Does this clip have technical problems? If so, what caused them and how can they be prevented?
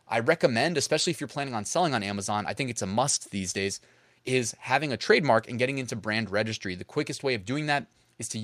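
No, nothing in this speech recording stands out as a technical problem, so there's no cause to track down and nothing to prevent.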